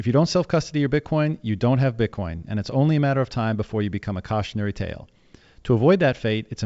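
There are no technical faults to describe in this speech clip.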